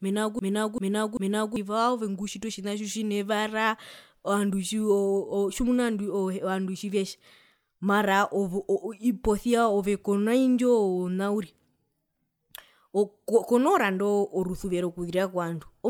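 From the very start to 1.56 s, the speech is caught in a broken-record loop already under way: a 0.39 s fragment plays back to back three times, likely because the player or stream stalled and kept resending its last buffer, so the speech for that span is lost.

Throughout the clip there is generation loss. The audio sounds swirly, hollow and smeared, with blurred consonant attacks and nothing above 19.9 kHz. This fits around seven passes through an MP3 encoder at 128 kbit/s, most likely, each pass adding its own quantisation noise and spectral holes.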